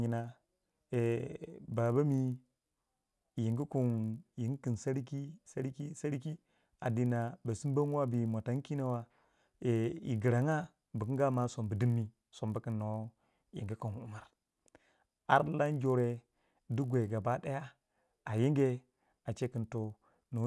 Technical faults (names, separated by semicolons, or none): resampler restarted on every block